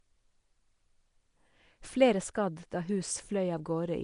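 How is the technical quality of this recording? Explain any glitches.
The speech carries plainly audible coding damage from start to finish: a rough, hissy halo around it, a smeared, underwater blur, and nothing above 10.6 kHz. This is likely Nellymoser compression, where fixed-size blocks get too few bits, so weak bands are dropped and replaced with noise, which fits a rate near 44 kbps.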